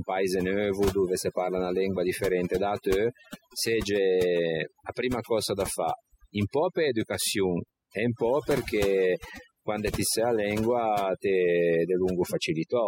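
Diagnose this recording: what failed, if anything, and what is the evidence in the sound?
Call-processing noise suppression is overdone: bands near the noise estimate are cut away throughout, leaving near-silent gaps with twinkling specks.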